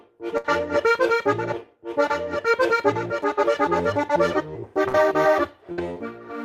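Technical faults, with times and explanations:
0.37–0.47 s, 4.88–4.97 s and 5.72–5.81 s: burst of packet loss. Each time, a short run of packets never arrived in time, so the receiver covered roughly 60 ms by extending the last sound it had and letting it fade. That patch is heard as a brief held buzz or dying hiss. The audio then picks up about 60 ms further on than where it broke off, so a small stretch of sound is simply missing.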